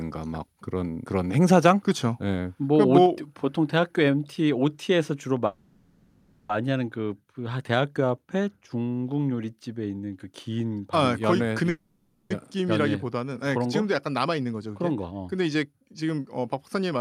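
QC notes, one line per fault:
3.06 s, microphone volume stepped down: the speech and background drop by about 3 dB in one step, likely the call software lowering the input gain.
5.46–6.50 s and 11.69–12.31 s, call audio freeze: the last sound is drawn out as a fading buzz or hiss for about 1.03 s, then 0.61 s, and the speech resumes where it stopped, so gaps are inserted and nothing is lost.
14.26–17.00 s, jitter buffer speed-up: short pitch-period pieces are cut repeatedly to drain excess buffered delay, so the speech runs about 9% fast at unchanged pitch, roughly a fifth of a second removed in all.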